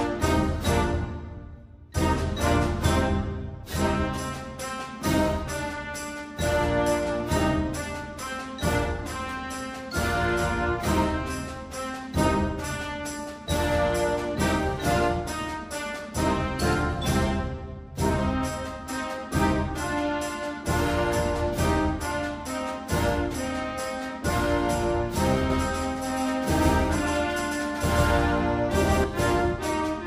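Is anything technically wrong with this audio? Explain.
Yes. From 25.50 to 29.04 s there is a doubled audio track, likely from a second, slower capture path feeding the same signal into the mix. A full-band copy trails by roughly 150 ms at about equal loudness, giving a dry, echo-like repeat that starts and stops abruptly.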